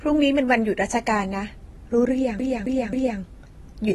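Throughout, the speech sounds like it has been through AAC compression, likely AAC-LC at a low bitrate around 32 kbps. The encoder discards content it judges inaudible, so nothing remains above 12.1 kHz and the codec damage is plainly audible, dulling and smearing sibilants.

From 2.39 to 3.20 s, the audio behaves like a CD stuck on one turn: the read position jumps back to the same spot each revolution, so a 0.27 s fragment plays three times in a rapid, even stutter.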